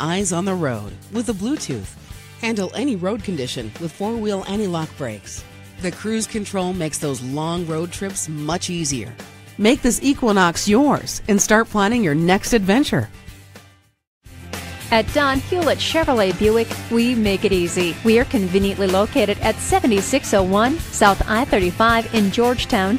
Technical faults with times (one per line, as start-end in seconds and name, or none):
none